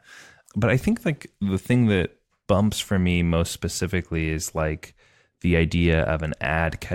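A short speech recording with no technical fault audible anywhere in it.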